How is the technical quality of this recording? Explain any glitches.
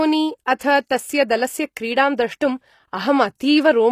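The recording has plainly audible codec damage throughout, plus two brief smeared attacks.

Across the whole clip, the treble sounds synthetic, with gritty, lispy s sounds and nothing above 14.9 kHz. This is likely HE-AAC compression at a low bitrate, around 24 kbps, rebuilding the upper band from copied lower bands.

At 0.59 s and 0.89 s, a short hiss of about 18 ms and 14 ms precedes a softened attack. This is pre-echo, where the codec spreads its block-wide quantisation noise into the quiet moment before a sharp onset.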